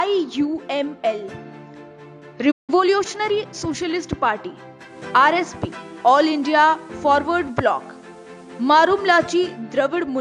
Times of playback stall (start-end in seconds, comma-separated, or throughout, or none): 2.51-2.70